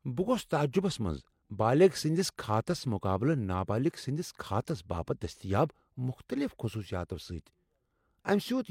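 Speech, with no technical faults to report anywhere in the recording.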